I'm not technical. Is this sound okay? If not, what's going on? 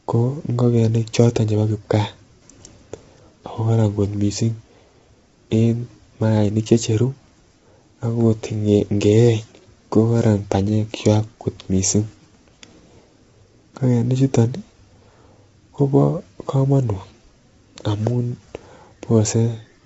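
No. The speech sounds rough and grainy from start to finish, with a hiss sitting between the voice's tones, and the top end is missing: nothing comes through above about 7.8 kHz, so sibilants and airiness are dull. That pattern is likely low-delay AAC compression, the kind used in video calls, squeezed too hard. It works in very short slices of audio, which keeps delay down but blurs the pitch detail of a voice.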